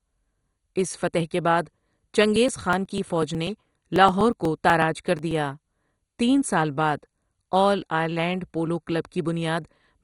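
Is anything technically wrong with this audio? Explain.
Yes, there are two faults. Throughout the speech, the sound is dull, with nothing above 11.2 kHz, and carries a gurgling, granular texture. This is likely MP2 compression at a low bitrate: Layer II divides the spectrum into 32 sub-bands, and when bits run short it shuts off the upper bands entirely and quantises the rest coarsely, so bands flicker in and out. That band-switching gurgle, rather than the smeared pre-echo of transform codecs, sets it apart.

From 2.36 s to 5.31 s, there are periodic USB or driver dropouts: about thirty tiny ticks, one every 0.123 s. Each time, a background task stalls the bus or driver, and roughly 2 ms of audio is skipped rather than filled with silence, leaving a small discontinuity that clicks. The strict, metronomic spacing and the fact that the ticks appear only where there is signal distinguish them from random crackle such as a loose cable or vinyl noise.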